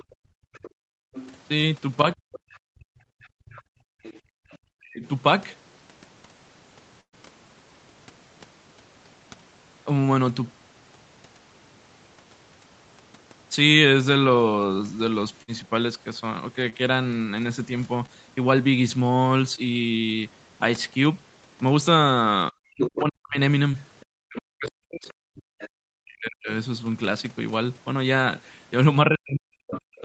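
From 0.0 to 4.58 s the other side's voice leaks through, sitting well below the talker. This is likely loudspeaker echo that the echo canceller failed to remove. It sounds faint behind the speech.

Across 0.04 to 4.48 s, the background is gated by the echo canceller. The room sound drops out in places, by about 34 dB at the deepest. Around three seconds are affected in all.

From 2.14 to 5.04 s, speech is suppressed in double talk. The talker's speech dips very deeply, in pieces totalling under half a second. The likely cause is the canceller confusing the talker with the echo.

At 7.01 to 7.15 s there is a burst of packet loss. About 120 ms never arrives. The receiver stretches the last sound and fades it, leaving about 90 ms of silence. Speech resumes with a piece missing.

A shorter burst hits at 15.43 to 15.50 s. About 60 ms is lost and bridged by a brief held sound.

Short concealed packet loss follows at 16.70 to 16.74, 18.06 to 18.10 and 19.56 to 19.66 s. 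Each time about 20 ms is lost. The receiver fills the gap from the last sound. Each is a small smear or wobble.

At 22.52 to 22.74 s, the background gates again, dropping about 28 dB for a moment.

From 22.77 to 25.68 s the other side leaks through again, now nearly as loud as the talker. This is likely echo the canceller left behind.

From 23.02 s to the end, speech is suppressed in double talk again. The talker's speech cuts out very deeply in pieces. The likely cause is simultaneous talk confusing the canceller.

At 23.71 to 23.76 s another short concealed loss of about 20 ms leaves a brief smear.

At 29.74 to 29.80 s a brief scrap of the other side leaks through, clearly below the talker. This is likely residual echo.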